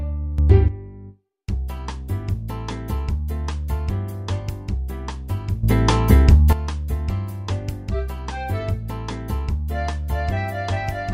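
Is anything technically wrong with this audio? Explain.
Yes. The audio shows two sudden gain jumps, where the level steps up abruptly and then drops back. The likely cause is a digital gain change applied from one sample to the next without a ramp, as when a setting or bit shift takes effect instantly. From 0.38 to 0.68 s the level rises by about 11 dB, and from 5.63 to 6.53 s by about 12 dB. The sound and the background noise jump together, then return to their earlier level.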